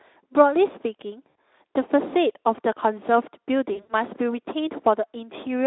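At 1.29 to 1.35 s, then 3.73 to 3.94 s (140 ms lost across 160 ms, longest run 80 ms), VoIP packet loss concealed by the speech codec: the decoder stretches its last pitch and filter into a buzzy tone or coloured noise that fades instead of leaving silence, unlike a plain dropout, over narrowband Speex coding.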